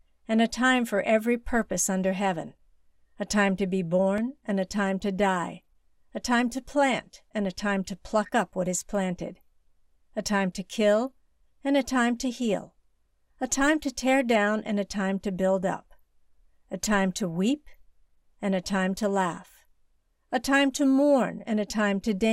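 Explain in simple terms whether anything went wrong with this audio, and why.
Five quick ticks sound between 3.57 and 4.38 s, just after "a time" and before "and a time to". These are CD scratch ticks. A blemish on the disc spoils a tiny patch of data on each turn. The player patches or silences it, leaving clicks shorter than two milliseconds.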